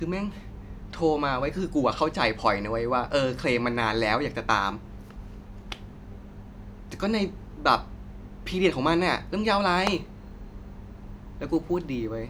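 Speech, and from 9.53 s to the end at 12.29 s there's a 100 Hz buzz riding under the speech: the resampler restarted on every block, so each 10 ms block converting 48 kHz to 44.1 kHz leaves a tick at its edge.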